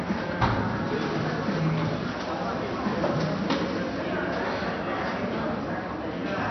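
No faults can be heard here.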